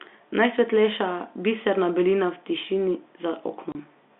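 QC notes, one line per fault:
3.72 to 3.75 s, packet loss filled with silence: a single 30 ms hole drops out of the speech near the end, with abrupt edges, because the receiver played digital silence where one packet never arrived. The length matches one packet of audio, which sets it apart from a fade or a level dip. The telephone-band G.711 line around it keeps its narrow 200 Hz to 3.6 kHz sound right up to the gap.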